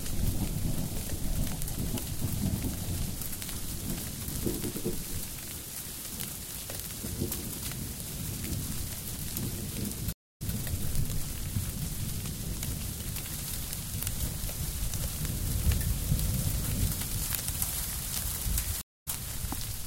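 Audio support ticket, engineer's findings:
Stream reconnect, 10.13–10.53 s: 0.28 s gap, then sound restarts 0.13 s earlier and repeats. Player connection dropped; fresh decoder restarted mid-stream. Waveform shows a flat-line gap; the spectrogram shows a blank column.

Stream reconnect, 18.81–19.08 s: 0.25 s gap, resuming slightly ahead, skipping a short piece. Same reconnect-and-restart signature: a flat stretch and then a faded-in restart.

Small jump in the sound at 10.88 s, no gap. Likely a dropped buffer (overrun): the capture was not read in time, so a few milliseconds were overwritten and the edges were spliced. It appears as a vertical broadband line and a waveform discontinuity.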